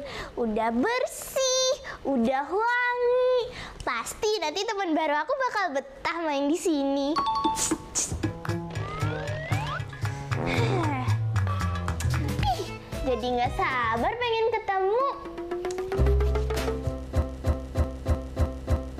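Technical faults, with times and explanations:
17.22 s to the end, broken-record loop: a 0.31 s fragment repeats exactly, back to back, six times, and the audio that should follow never arrives. The likely cause is a stalled player or stream resending its last buffer. Unlike an echo, each repeat is identical, with no decay.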